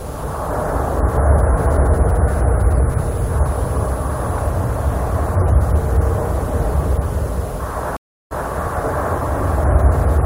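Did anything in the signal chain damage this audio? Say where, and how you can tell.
Yes: at 7.97 s the sound drops out for 0.34 s, then repeats from about 0.17 s earlier by 8.48 s. This is a stream reconnect: the network link dropped and the server resent buffered audio.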